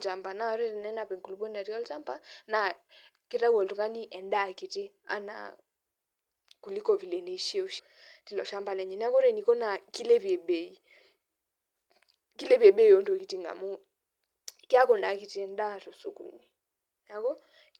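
At 7.79 to 7.81 s, after "kuliko vile", roughly 0.7 s of audio was dropped, a skip ahead, so the speech jumps forward with no gap. From 8.21 to 9.49 s, just before "naa kilepie bei", a jitter buffer speed-up trimmed pitch periods, removing around 0.15 s, so the speech runs 110% fast and sounds hurried at unchanged pitch.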